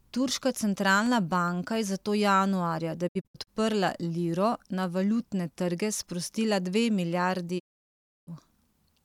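A speech clip with two kinds of fault. At the start, a disc blemish corrupts more data than the player's error correction can rebuild, so on each pass the player conceals the damaged samples. The result is CD scratch ticks: six small ticks between 1.06 and 1.76 s, the longest only a few milliseconds, just before "je zato januarja da". After that phrase, the receiver loses good digital frames and mutes until valid data returns, causing a digital broadcast dropout from 3.07 to 3.49 s. About 192 ms of audio disappears in several short holes spread over 384 ms, the longest 64 ms, each edge faded over 20 ms. This pattern points to several separate lost frames. A second digital broadcast dropout runs from 7.58 to 8.29 s, losing 672 ms of audio, again with 20 ms fades, and the speech sent during that gap is gone.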